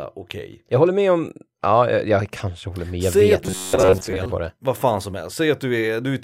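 From 3.44 to 4.26 s the speech becomes a rigid, metallic buzz at 93.8 Hz: robotic sound from repeated short buffers. Audio likely arrived too seldom, so a segment of about 10.7 ms was looped, replacing roughly 70 percent of the real signal.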